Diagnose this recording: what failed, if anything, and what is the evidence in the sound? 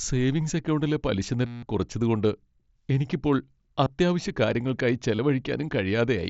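The fault is concealed Bluetooth headset packet loss on the wireless link between headset and phone. The longest gap runs from 1.47 to 1.63 s, between "സേവിംഗ്സ് അക്കൗണ്ടിലെ" and "കുറച്ചതു കൊണ്ട്". For about 160 ms a buzzy, steady-level tone replaces the sound, then warbles as real audio resumes, which fits a run of about 21 lost 7.5 ms packets. Briefer patches fall at 3.85 s and from 5.16 to 5.19 s, after "എനിക്കിപ്പോൾ അത്യാവശ്യകാര്യങ്ങൾക്കായി". In each case the receiver repeated the best-matching slice of recent waveform to fill the hole. The wideband mSBC encoding around these gaps passes the sound up to 8 kHz.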